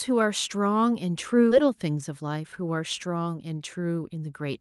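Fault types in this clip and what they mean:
Skip ahead: Around 1.51 to 1.53 s the speech jumps forward. Roughly 0.4 s of audio has gone missing, most likely dropped in transit or thrown out when the jitter buffer overflowed while later audio was already waiting. Nothing fills the hole, so the two sides are spliced almost directly. You get an abrupt seam with no silence, and the speech seems to leap ahead mid-flow.
Jitter buffer speed-up: From about 2.09 to 2.44 s the buffer was carrying more delay than it wanted, so the receiver trimmed out short pitch-period-sized slices again and again to catch up. In total it removed something like 50 ms, so the speech runs about 12 percent fast there. The pitch stays put because whole cycles are cut rather than resampled, but that stretch sounds hurried.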